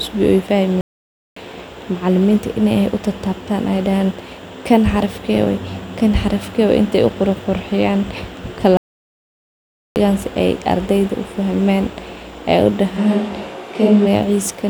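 The player most likely ran dry of data or had its thread blocked, producing a playback stall from 0.81 to 1.36 s: the speech cuts out mid-flow into roughly 0.55 s of silence, then picks up again. A second, longer stall runs from 8.77 to 9.96 s, a gap of about 1.19 s. Both dropouts sound like the audio freezing rather than a natural pause.

From 12.99 to 14.05 s the close microphone's feed was likely lost, causing a switch to a distant microphone further from the speaker. The voice abruptly turns roomy and hollow with thinner bass, though its loudness barely changes. Background room noise becomes audible at around 30 dB below the speech. The sound snaps back to the close, dry character just as suddenly at the end of that stretch.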